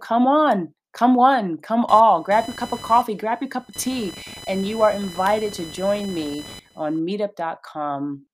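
From 1.89 s to 6.99 s, just after "one come", a buzzing chirp sits under the speech: computer activity noise. Changing current draw in the computer's processor, graphics card or peripherals is disturbing the ground shared with the audio circuit, and that interference ends up in the recording. It pulses at around 1 kHz, roughly 20 dB below the speech, and its rise and fall track the machine's load rather than anything in the speech itself.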